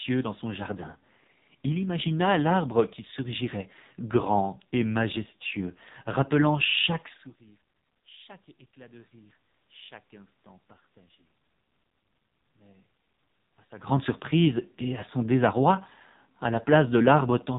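Throughout the speech there is heavy AMR narrowband mobile codec damage. Nothing above 3.8 kHz survives, and the voice sounds buzzy and synthetic, which fits a low AMR-NB mode near 5.9 kbps. At that rate only a few pulses per 5 ms drive the vocal tract model. The level changes near 7 and 13.5 s come from the talker moving.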